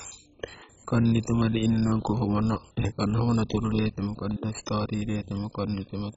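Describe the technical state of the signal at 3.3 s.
At 3.3 s the speech shows MP2 compression, present throughout. Nothing sounds above 7.5 kHz, and coarse quantisation gives a dull, gurgling grain, likely from a very low bitrate near 16 kbps.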